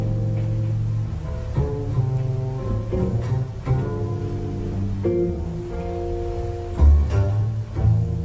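No faults found; the audio carries the expected call-codec character, with nothing above 8 kHz, which fits a G.722 path.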